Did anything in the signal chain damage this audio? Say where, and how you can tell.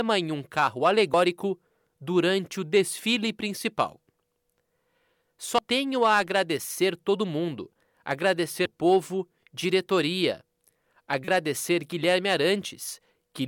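Yes, in the codec stage: damaged data in a compressed stream. Short blips appear at 1.14, 5.58 and 8.66 s, and a longer one runs from 11.25 to 11.28 s. Corrupted frames are misread before the decoder resyncs.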